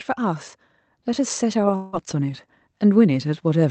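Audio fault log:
1.06–3.70 s, automatic gain rising: finding the input too quiet, the gain control raises its level steadily, so speech and background swell together to the end.
1.75–1.96 s, long network dropout: a fading buzz replaces about 0.18 s of speech, likely packets that never arrived, which the receiver covered by extending the last sound.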